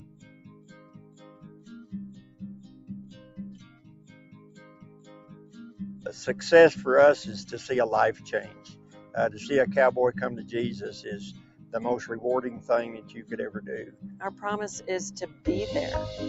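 The sound pumps and thins throughout, with sustained parts and tails swelling and sinking over a swing of roughly 20 dB while sharp onsets pass intact. That is a speech noise suppressor applied to music or sounds, treating steady tones and ambience as noise. Sound cut by the noise suppressor is clearest at 0.0–1.93 s, 2.15–2.42 s, 2.58–3.38 s, 3.56–5.8 s, 8.51–9.14 s, 11.36–11.73 s, 13.02–13.31 s and 15.27–15.45 s. In each of these, held or decaying material drops by about 8 to 9 dB. The audio also carries the 8 kHz top end and coding texture of an Opus call path, which fits a bitrate near 48 kbps.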